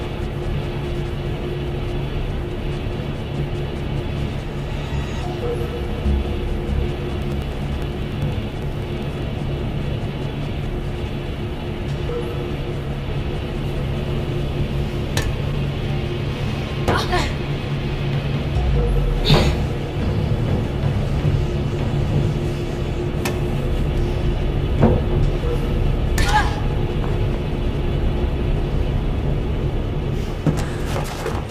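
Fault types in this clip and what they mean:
periodic USB or driver dropouts: regular ticks every 0.1 s from 7.12 to 9.22 s, as roughly a millisecond of sound drops to silence each time the USB bus or driver stalls.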